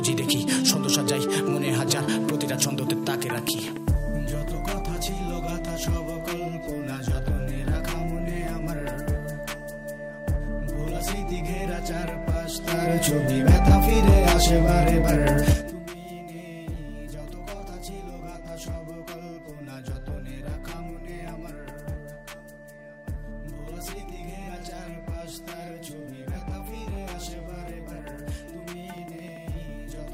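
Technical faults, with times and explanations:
2.90–4.35 s, 12.54–12.97 s and 15.45–15.79 s: zipper noise. Level moves down about 10 dB, up about 10 dB, then down about 20 dB in unsmoothed jumps of about 1, 2 and 4 dB, roughly ten per second. Each jump clicks, giving a ticking zip.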